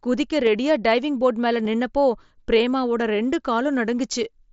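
Concealed Bluetooth headset packet loss hits this speech clip twice, at 0.46 s just before "ரெடியா டைவிங் போர்டு மேல" and at 1.65 s right after it. Each time a single 7.5 ms packet dropped between headset and phone, and the receiver filled the gap by repeating a closely matching stretch of the preceding waveform, so each loss is nearly hidden. Both sit inside the mSBC wideband headset link, whose light grainy noise rides on loud sounds.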